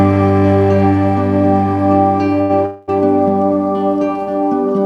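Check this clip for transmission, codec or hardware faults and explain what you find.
Two transmission faults from late packet delivery, both around the midpoint.

From 2.41 to 2.52 s there is a short stall from a late packet. A packet arrived late and the jitter buffer emptied, so the receiver stretched the last sound for about 81 ms before resuming without loss.

From 2.66 to 2.90 s comes a call audio freeze, likely from packets held up in transit that drained the buffer. The last sound is prolonged for 222 ms, never dropping to silence, and the audio then continues from where it stopped, adding delay rather than losing anything.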